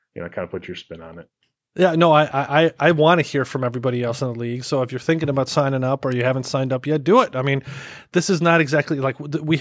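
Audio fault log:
No technical faults can be heard anywhere in this speech recording; the signal stays steady and continuous, with nothing in it pointing to a fault in the recording or transmission chain.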